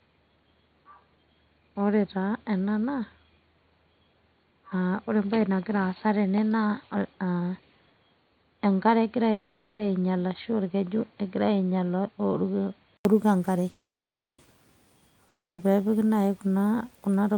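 From the start until 13.05 s the speech is dull and boxy, with nothing above 4.4 kHz and a faint extra noise floor. This is likely an input switched to a poorer device. The sound clears after an 80 ms silence, at about the same level.

At 9.31 s a call audio freeze, likely from held-up packets, stretches the last sound as a fading buzz or hiss for 480 ms. Speech then resumes where it stopped, with nothing lost. A second freeze at 13.69 s lasts 690 ms, with 550 ms of it silent.

At 15.28 s a long network dropout, likely from packets that never arrived, loses 300 ms of audio. The fill decays to 220 ms of silence before the speech jumps ahead.

From 17.12 s to 17.37 s a jitter buffer speed-up trims about 40 ms of pitch periods. The speech runs at 113% speed with unchanged pitch and sounds hurried.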